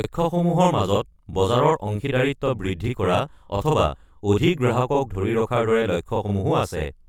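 From start to finish, the speech carries a channel delay (doubling): one channel runs about 40 ms behind the other, and when the two are folded to mono the late copy lands as a distinct second voice at equal level, a tight slap just behind each syllable. Unlike room reverberation, there is one discrete repeat with no decaying tail. It also differs from comb filtering, whose offset is too short to hear as separate and only colours the tone.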